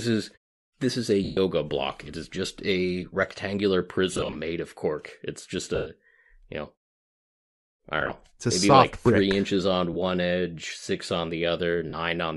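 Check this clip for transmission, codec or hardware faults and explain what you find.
The audio has two faults: coding damage across the whole clip and six brief dropouts from lost radio frames.

Bluetooth LC3 compression runs throughout. The encoder likely ran at a rate that fits 48 kbps with 10 ms frames, zeroing part of the upper spectrum and filling it with noise. This gives the speech a plainly audible breathy, grainy edge.

Lost LE Audio frames cause six dropouts:
1.24–1.37 s, right after "is this is a"
4.13–4.36 s, between "is just a rectangular" and "made of cork"
5.75–5.86 s
8.01–8.11 s
9.93–9.96 s, between "like three inches on" and "edge six on"
11.90–11.93 s

Each time, the decoder repeated the last spectrum with random signs, so the sound smears into noise. The longer unbroken gaps, around 110–130 ms, fade toward silence. At 4.13 s the losses are scattered over about 220 ms in short runs, and at 8.01 s they are scattered over about 100 ms.

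The fades to silence in pauses are normal muting and are not part of these faults.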